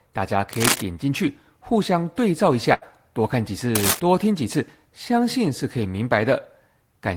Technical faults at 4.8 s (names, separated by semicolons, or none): none